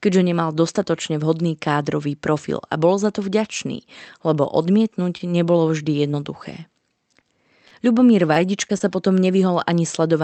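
Short concealed packet loss: about 20 ms of the speech arrived too late each time at 5.17–5.22, 6.12–6.25, 7.20–7.24, 7.68–7.73, 8.34–8.37, 8.68–8.71 and 8.78–8.82 s, and the decoder extended the preceding sound. Each gap is a brief smear or wobble. The call codec's audio sits below a cut-off of about 8 kHz.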